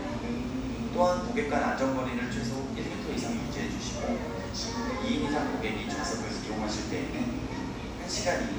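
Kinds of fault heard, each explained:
Nothing wrong turns up here: no dropouts, clicks, distortion or timing glitches anywhere in these sounds.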